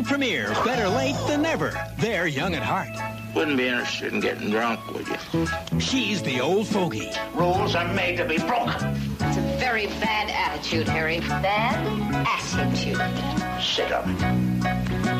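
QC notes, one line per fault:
5.60 s and 7.60 s, dropped samples: a stretch of a fraction of a millisecond has likely gone missing from the stream each time, so the waveform leaps straight to a later value. Nothing audible is lost; each jump is heard as one sharp, isolated click.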